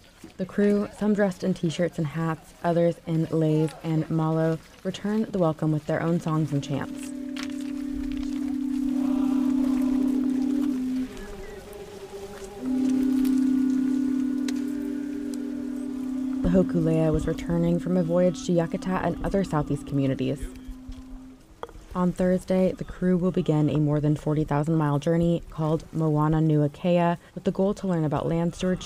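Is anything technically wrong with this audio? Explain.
Yes. A time-stretched section runs from 8.28 to 11.02 s, where the audio abruptly plays 1.74 times faster while its pitch stays put. This is likely software squeezing the passage to fit a set length by dropping short slices to preserve pitch, leaving it rushed.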